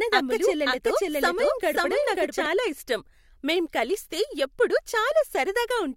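A doubled audio track runs from the opening to 2.46 s: a second, equally loud copy of the speech trails about half a second behind, dry and full-band, then cuts off abruptly. Likely cause: a slower capture path recording the same signal again.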